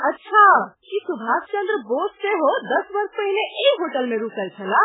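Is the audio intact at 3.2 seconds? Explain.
No. At 3.2 seconds the speech carries heavy damage, likely from MP3 compression at a very low bitrate near 8 kbps, present throughout the clip. Starved of bits, the encoder drops weak frequency lines that flicker frame to frame, giving a watery, swirly sound with smeared attacks. A spectrogram shows a hard ceiling at 3.8 kHz and blotchy, patchy energy below it.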